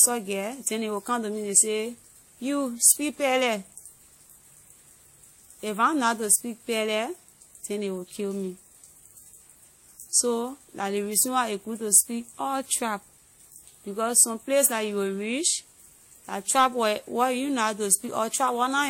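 Right from the start and all the way through, this speech has that smeared, doubled-up coding texture you get from transcoding between lossy codecs. It sounds like it likely went through a WMA-style encode first and then MP3, both at fairly low bitrates around the 64 to 70 kbit/s range. The second encoder wastes bits re-coding the first one's swirly artefacts and adds its own artefacts on top, and nothing survives above 16.7 kHz.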